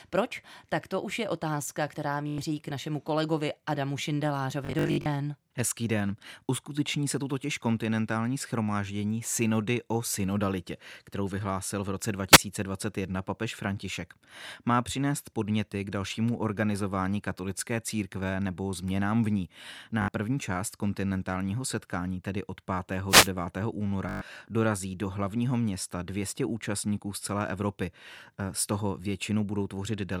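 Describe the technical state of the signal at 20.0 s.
At 20.0 s there is a Bluetooth stutter, from 20.02 to 20.08 s. It falls right after "nebo změnám v ní" and before "první část kontinentálního setkání". Audio data arrived late or went missing, so the receiver kept replaying its last short buffer. Those repeats form a brief buzzing, machine-gun stutter in the speech. About 61 ms of sound is lost, which points to a few packets dropping out in a row. The speech then picks up further on, as though it had kept playing.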